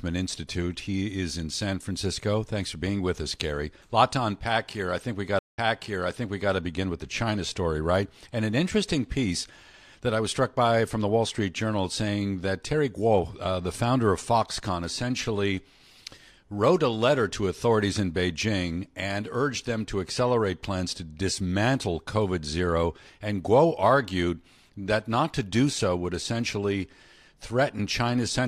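A speech clip with a stream reconnect between 5.39 and 6.52 s. After "I think we got" the audio drops out for 180 ms, then resumes with "to begin with the", placed about 0.95 s earlier than where it stopped, so a short stretch is heard twice. The connection broke, and a fresh decoder picked the stream up mid-way from a resent burst. On a spectrogram this shows as a blank vertical band across all frequencies, and the waveform shows a flat gap followed by a brief fade-in on the first frame.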